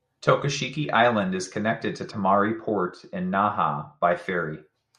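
A treble-cutting de-emphasis filter has been applied wrongly to this speech clip, either to audio that was never pre-emphasised or a second time over audio that already had its boost removed. From 2.11 s to 4.11 s, the response slopes smoothly downward above the midrange, sitting about 13 dB lower at 10 kHz than at 1 kHz. Over those two seconds, consonant detail and air fade, leaving the speech dull and muffled before the brightness returns.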